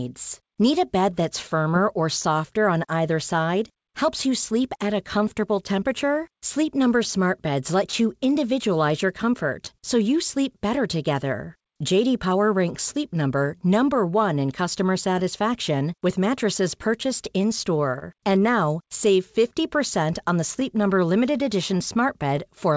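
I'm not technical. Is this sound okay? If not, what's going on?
No. It's a speech recording sent over a call connection, and three related problems show up.

First, there is clock drift between sender and receiver. The sending device's internal clock runs about 2% slow compared with the receiving one, so sound arrives slightly too slowly to keep up. This is different from a bad connection. The problem is steady and lasts the whole clip, rather than coming and going with network trouble.

Because of that drift, you hear repeated timing corrections from 0.43 s to 22.75 s. The receiver keeps stretching the speech by repeating tiny slices so it doesn't run out of sound, adding about a third of a second in total. The result is speech at about 99% of its natural pace, with faint, unevenly spaced hiccups. Unlike dropouts, these edits always lengthen the sound and never remove anything.

Separately, there are scattered short gaps. 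Between 0.04 s and 18.04 s, about twenty bits of sound arrived late or went missing, the longest around 30 ms. Each one was patched by extending the sound just before it, which leaves a brief tick or smear. Three more, even smaller, fall between 20.6 s and 22.4 s. These are isolated blips rather than a steady slowdown, and nothing is actually missing afterwards.

The call codec also trims everything above 8 kHz, so the speech sounds a little less crisp than a studio recording.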